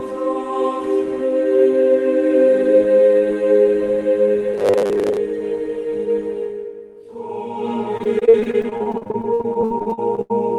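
From 4.54 to 5.17 s the sound turns into a rigid, metallic buzz pitched at 100 Hz. This is robotic sound from repeated short buffers: about half the stretch is a replay of the last fragment, which fits a 10 ms buffer, likely because new audio arrived too seldom.

From 7.97 to 10.32 s the sound becomes choppy and robotic, with pieces missing. This is repeated packet loss (robotic sound). Holes come one after another, the longest 84 ms, and each is patched by extending the preceding sound, so about a third of the span is concealment.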